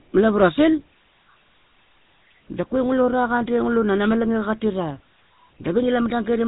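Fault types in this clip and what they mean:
GSM full-rate codec: the speech passes through a vocal-tract model driven by sparse regular pulses, which fits a 13 kbps rate. The result is plainly buzzy and gravelly. A spectrogram shows nothing above 4 kHz and a smeared, grainy harmonic structure.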